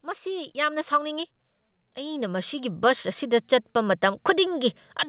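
The speech and its background swell together from 0.05 to 1.37 s, by about 6 dB, and again from 1.95 s to the end. This is automatic gain rising: the gain control found the input too quiet and gradually raised it.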